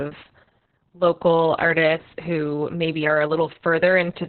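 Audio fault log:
Throughout, Opus voice compression: the speech is heavily damaged, with nothing above about 4.3 kHz, so it sounds muffled, like a telephone line. The narrow band and the hoarse, slightly robotic quality point to Opus running its SILK speech coder in narrowband mode at a very low rate, around 6 kbps, possibly with long 60 ms frames. At that rate the coder models the voice with a coarse excitation signal, which roughens and buzzes the speech.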